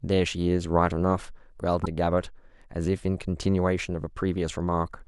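A speech recording with damaged data in a compressed stream from 1.82 to 1.87 s: corrupted bytes break the frames there, so the decoder misreads them and loses sync while it hunts for the next valid frame header, producing a brief glitch about 50 ms long.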